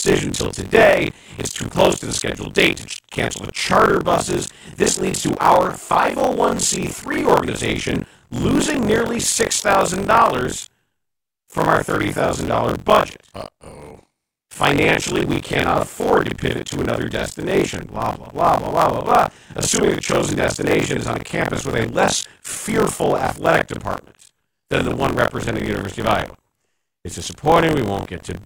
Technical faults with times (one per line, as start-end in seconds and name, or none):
0.00-28.45 buffer tearing